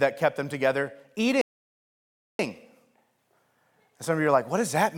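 At 1.41 s the player exhausts its buffered audio, causing a rebuffering stall: speech drops to silence until 2.39 s, then resumes seamlessly, adding 0.98 s.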